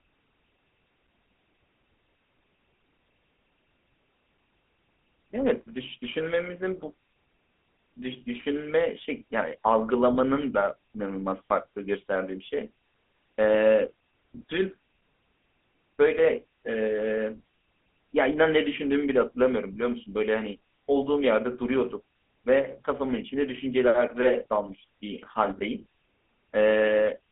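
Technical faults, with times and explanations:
Throughout, GSM full-rate codec: a plainly buzzy, gravelly roughness from pulse-driven vocal-tract modelling, with the band held to about 250 Hz to 3.5 kHz, which fits 13 kbps full rate.
10.14 to 10.17 s, lost GSM frame: a short rough, metallic ring lasting 20 ms as the last good frame's settings get repeated, which fits one dropped frame.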